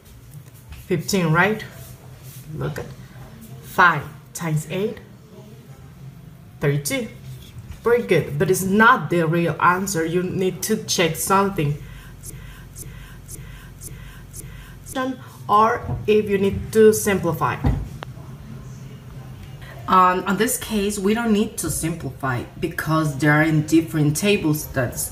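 The audio has two faults. From 12.3 to 15.0 s there is a broken-record loop. A fragment of about 0.53 s repeats exactly, five times back to back. The audio that belonged there is gone. A stalled player or stream that kept resending its last buffer is the likely cause. At 18.03 to 18.05 s a single loud pop cuts in, roughly 10 dB above the surrounding sound, which continues underneath. It is short and sharp. The likely cause is a voltage spike from a plug, switch, static discharge or driver glitch.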